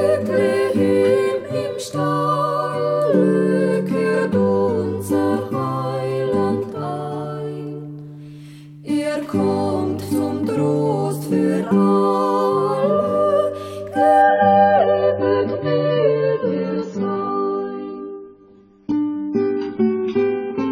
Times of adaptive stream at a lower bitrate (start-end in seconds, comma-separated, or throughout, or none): 14.22-20.71